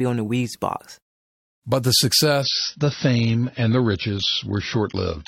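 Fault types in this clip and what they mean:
Adaptive stream at a lower bitrate: at 2.42 s the player drops to a leaner stream, treble gone above 6.5 kHz, no gap, fitting a 96-to-24 kbit/s switch.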